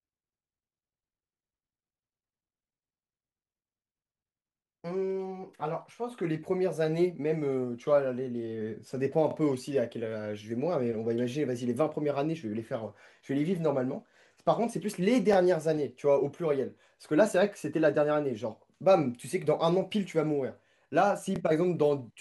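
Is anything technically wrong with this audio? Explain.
Yes, this speech clip has overlapping chunks at 9.31–9.33 s, 15.33–15.36 s and 21.36–21.38 s. Every 6 seconds, each block restarts 25 ms early, so that sliver repeats as a brief stutter.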